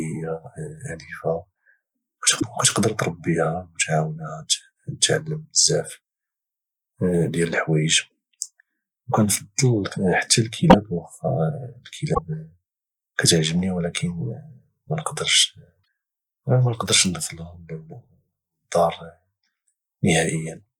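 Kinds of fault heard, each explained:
Broken MP3 bit reservoir: speech skips ahead in four 38 to 54 ms glitches. Lost frames likely left later ones reading wrong borrowed data.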